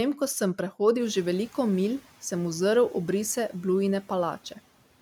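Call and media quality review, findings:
Noise suppressor catching up, 1.0–1.99 s: room noise jumps sharply, about 24 dB, around 1 s, passes with little reduction, then sinks about 5 dB over 0.99 s as the estimate adapts. A gradual decay, not gating's abrupt on/off switching.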